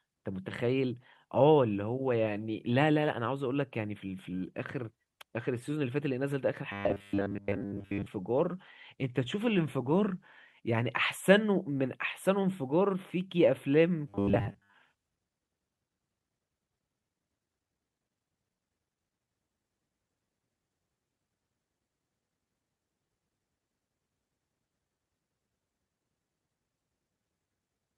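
Speech with robotic sound from repeated short buffers at 6.72–8.07 s and again at 14.09–14.75 s. The voice turns into a rigid, metallic buzz fixed at 100 Hz, which fits a 10 ms chunk being looped, most likely because fresh audio arrived too slowly and the gap was filled with repeats. On a spectrogram, evenly spaced 100 Hz harmonic lines appear, and the waveform shows identical 10 ms cycles.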